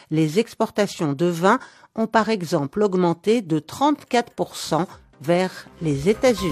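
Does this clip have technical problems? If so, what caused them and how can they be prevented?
No, this clip has no technical problems, so there is nothing to prevent.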